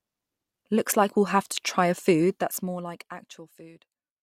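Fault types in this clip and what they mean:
No faults are present.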